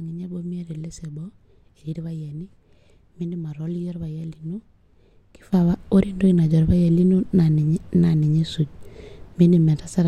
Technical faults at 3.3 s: none

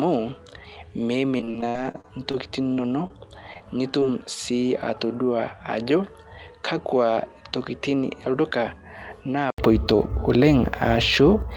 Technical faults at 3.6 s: input switched to a poorer device; short concealed packet loss

